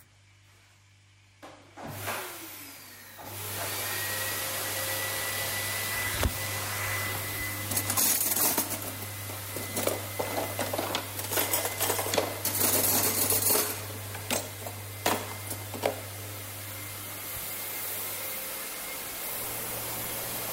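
From 19.13 s to the end, the audio takes on a steady buzz at about 46.9 Hz and hurries forward at 1.12 times its proper speed while its pitch stays essentially unchanged. This is a block size mismatch (truncated). One stage hands over longer blocks than the next stage reads, so the tail of each block is discarded. The repeated cut at each block boundary produces the buzz, and the missing pieces make the audio run fast. The buzz rate fits a 1024-sample read.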